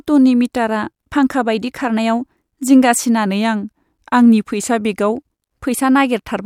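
From 3.26 s to 5.12 s, the speech drops in pitch and slows down together. The shift is about 94 cents, close to a semitone flat, and the pace is roughly 5.3% slower. At 5.12 s it snaps back to normal. This is a drift correction step. Software keeping two clocks in line likely changed the playback rate in one jump to adjust its buffer. The voice sounds briefly detuned and sluggish.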